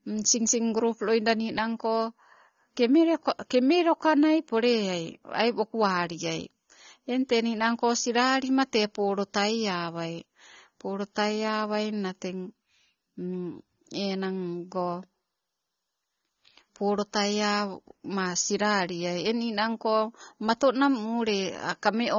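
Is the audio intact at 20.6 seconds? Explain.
No. At 20.6 seconds, as throughout, the speech sounds dull and smeared, with nothing above 7 kHz. This is likely AAC compression at a low bitrate, around 24 kbps.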